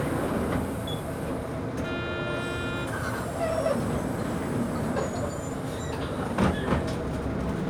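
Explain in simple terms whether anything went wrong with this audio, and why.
Nothing went wrong with it.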